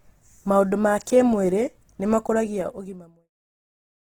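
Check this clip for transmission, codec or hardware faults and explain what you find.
One codec fault runs through the whole of this speech clip; the smooth fade-out from about 2 s to 3.31 s is an ordinary edit, not a fault.

Opus compression, throughout: the speech sounds grainy and rough, with plainly audible noisy texture where tonal detail should be. This is likely the Opus music (CELT) mode starved of bits, filling bands with folded or noise-like content, which fits a rate near 16 kbps. Unlike MP3 there is less swirling, since few spectral holes are left, and unlike Opus's speech mode the sound isn't muffled, since content still reaches about 20.1 kHz.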